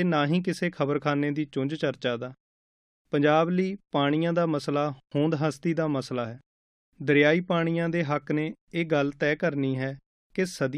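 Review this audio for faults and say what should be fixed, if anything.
Nothing stood out on listening to this speech recording, so there is nothing here that needs fixing.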